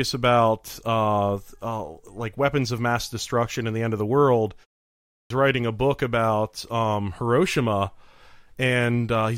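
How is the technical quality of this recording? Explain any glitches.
One glitch stands out: a clipped start after a pause at 5.07 s. After "end of the world" there is about half a second of silence, and when sound resumes, the first 233 ms is gone. The audio cuts in abruptly before "writing a book about". The output went idle during the gap and was still waking when the sound arrived. This fault actually swallows speech.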